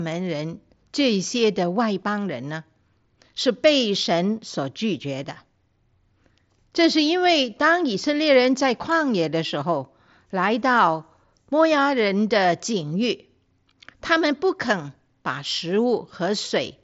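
No technical faults can be heard in this speech recording, which shows the wideband character of a Bluetooth mSBC headset link, with nothing above about 7.7 kHz and a light grain on the louder sounds.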